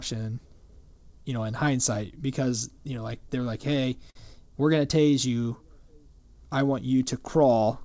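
Speech, carried over a call path whose sound stops at 8 kHz, which fits the G.722 wideband codec. From 2.96 to 4.17 s there are repeated stalls, a stutter. Packets arrived late, and the jitter buffer ran dry seven times. Each time the receiver stretched the last sound to cover the gap. The longest gap lasts about 49 ms. Together they fill 104 ms, roughly 9% of that stretch. Nothing is lost, but the speech drags and catches. From 4.82 to 5.92 s comes a jitter buffer slow-down. The buffer was building a reserve. It repeated single pitch periods and bits of pauses, adding 79 ms. Speech there runs at 93% speed with unchanged pitch, so sounds feel slightly drawn out.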